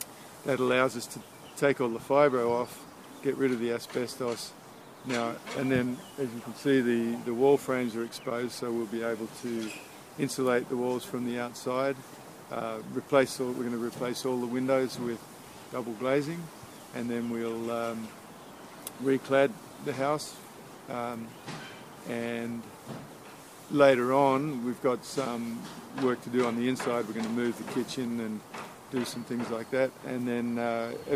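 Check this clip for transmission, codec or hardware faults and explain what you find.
No transmission, codec or hardware faults are audible anywhere in the clip.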